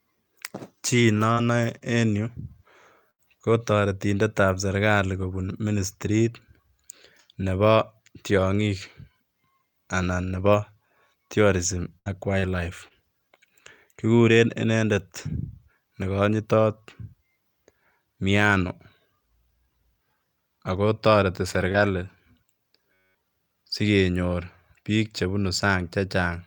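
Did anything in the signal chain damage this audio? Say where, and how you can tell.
Yes. On the network side there are scattered short gaps in two stretches, 1.33 to 3.20 s and 11.64 to 13.66 s. Each has about three small holes, the longest around 70 ms. The receiver papered over them by continuing the last sound, so you hear brief ticks and smears rather than silence.

Right after "ako toreti" you get lost packets rebuilt from error correction at 21.54, 21.60, 21.74 and 21.78 s, each a 20 ms frame. The next packet carried a low-bitrate backup copy, so nothing drops out, but those moments sound grainier.

In the same spot, 21.72 to 21.76 s, there's a short concealed packet loss where 20 ms never arrived and had no backup. The decoder extrapolated from the preceding audio and crossfaded back in, which gives a quick wobble or smear.

At 22.93 to 23.15 s there's a system hang loop, and that one's at the driver and buffer stage. 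The machine stalled while the hardware kept replaying one 10.67 ms chunk about 20 times, which produces a flat buzz at 93.8 Hz. That loop length fits a 512-sample buffer.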